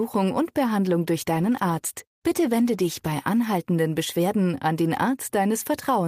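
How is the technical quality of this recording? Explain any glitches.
The speech turns rough, watery and duller from 1.27 to 3.31 s. This is a call bitrate drop: the link's bandwidth estimate fell and the encoder coded far more coarsely for about 2 s, consistent with a fall from roughly 32 to 16 kbps, trimming high frequencies until it recovered.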